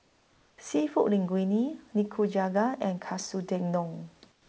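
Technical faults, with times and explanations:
0.00–0.58 s and 4.32–4.49 s, comfort noise in place of the background: the pauses become steady, featureless hiss, about 3 dB then 8 dB quieter, likely from discontinuous transmission.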